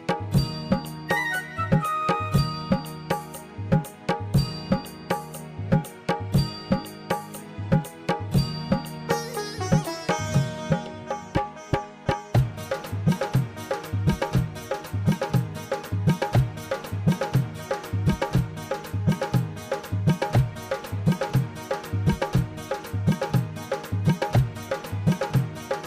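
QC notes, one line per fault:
No faults found.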